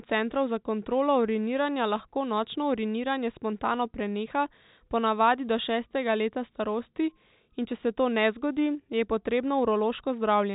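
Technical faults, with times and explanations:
No technical faults found; the speech carries the ordinary G.711 mu-law telephone band, with nothing above 4 kHz, as expected of that path.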